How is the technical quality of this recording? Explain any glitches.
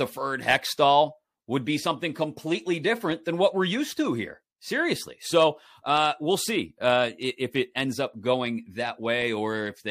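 Nothing in this recording trips up the ear, with no glitches to point to anywhere along the way.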